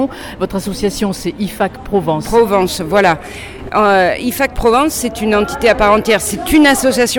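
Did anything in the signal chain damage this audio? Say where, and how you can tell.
No, nothing in the signal chain damaged this audio.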